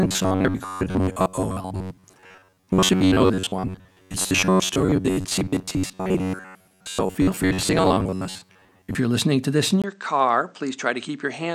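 From 0.01 s to 8.96 s, just before "you're listening to this", the speech has a rigid, metallic buzz pinned near 94 Hz: robotic sound from repeated short buffers. Most of the audio is likely being replaced by repeats of a roughly 10.7 ms slice while new data arrives too slowly.

At 9.82 s, right after "listening to this in", there is a 20 ms gap. From there to the end the speech turns duller and quieter, by about 5 dB, with a faint new noise floor. The input likely switched to a poorer device.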